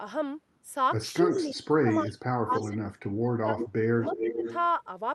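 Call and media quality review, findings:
Speech suppressed in double talk: talker dips at 1.24–2.82 s (deepest around 35 dB down), 3.19–3.59 s (around 25 dB) and 3.94–4.45 s (around 15 dB). Likely the echo canceller misreading overlapping far-end speech as echo and attenuating both.

Echo leak: delayed copy of the voice at 1.29–1.51 s (310 ms delay, around 20 dB below speech), then 2.52–2.69 s, 3.58–3.69 s and 4.09–4.68 s (367 ms, roughly 15, 5 and 10 dB below). Likely loudspeaker pickup the far-end canceller failed to remove.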